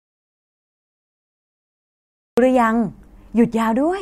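A speech clip that opens in an audio dropout to silence: from 0.0 to 2.38 s there is silence with no room tone, likely a lost input while recording continued.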